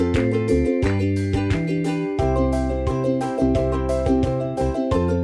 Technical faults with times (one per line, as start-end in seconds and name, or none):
none